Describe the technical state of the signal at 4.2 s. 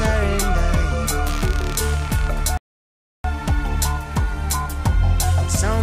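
At 4.2 s the signal is intact, with no audible fault at that moment.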